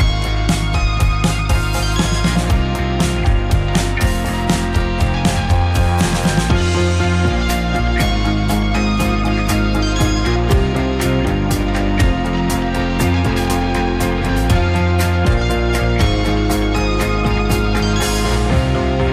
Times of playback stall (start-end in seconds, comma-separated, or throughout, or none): none